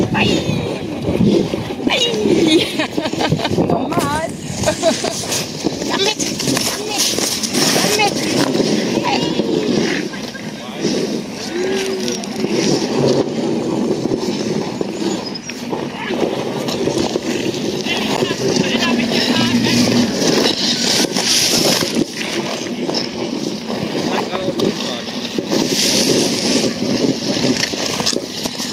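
The clip has gain pumping throughout: the level is pushed down on each loud sound and then swells back up in the gaps, with a swing of around 10 dB. The likely cause is input gain set too high with a fast limiter or compressor reining it in. On a waveform the envelope looks flattened and squashed, with quieter stretches rising between loud moments. At 18.17 s there is a block of digital silence about 10.7 ms long, which fits a 512-sample buffer that was not filled in time. At that length it comes across as a tick or dip rather than a hole, and it shows on the waveform as a flat, abrupt break and on a spectrogram as a thin vertical gap.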